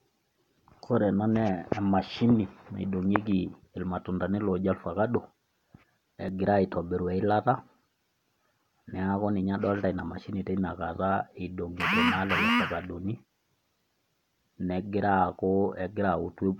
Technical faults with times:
0.74 dropped buffer (overrun)
6.29 dropped buffer (overrun)

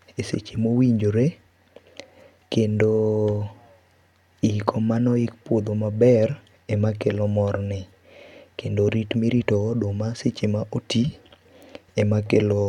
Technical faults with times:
none

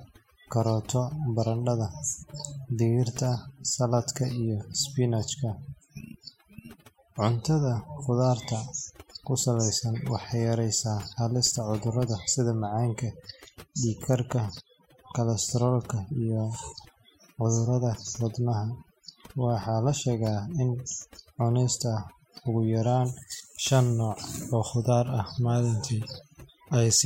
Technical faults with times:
0.00-27.05 overdone noise removal

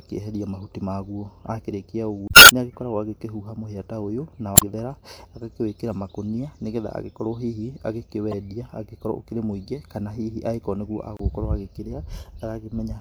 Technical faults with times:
2.26-2.51 damaged data in a compressed stream
4.54-4.63 damaged data in a compressed stream
8.31-8.34 damaged data in a compressed stream
11.17-11.21 damaged data in a compressed stream

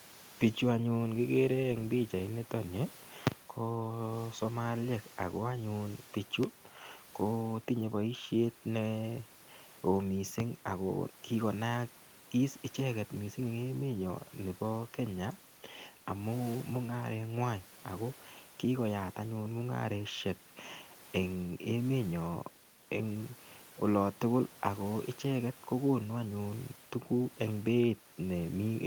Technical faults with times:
none

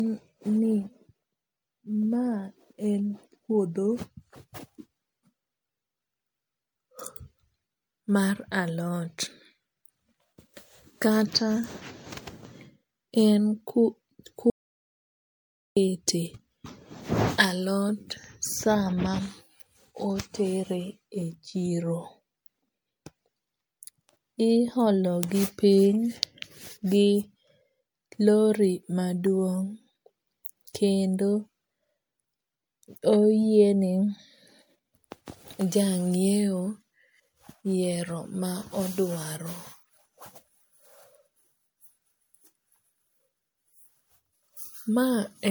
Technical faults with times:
0.00-45.51 generation loss
14.50-15.77 audio dropout to silence

